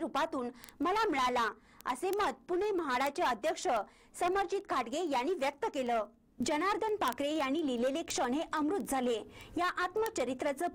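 From 0.13 to 10.72 s, word clock ticks land about twenty times a second: an unlocked receiver slipping a single sample each pass, roughly 400 ppm off.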